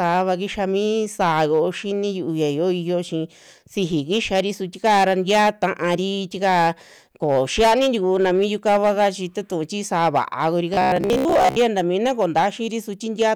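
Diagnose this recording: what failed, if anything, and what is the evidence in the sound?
Hard clipping throughout: peaks overdriven by about 11 dB at the converter or sample-format stage are cut flat, adding crackle on a few percent of samples.

Robotic sound from repeated short buffers, 10.74 to 11.58 s, between "tuu ti sa'aa va'a" and "ta mina koo": a rigid 66.8 Hz buzz, likely driver buffer underruns repeating 15 ms blocks.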